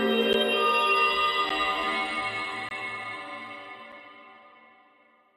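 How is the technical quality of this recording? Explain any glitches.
The recording has four blocks of digital silence, at 0.33 s, 1.49 s, 2.69–2.71 s and 3.92 s. The sound drops to silence for 6 to 21 ms, which fits output buffers that were not filled in time. The sound cuts out and back with no fade. The three gaps under 15 ms are heard as ticks, and the 21 ms gap is heard as a short hole. Each is a flat gap in the waveform and a broadband vertical line in the spectrogram.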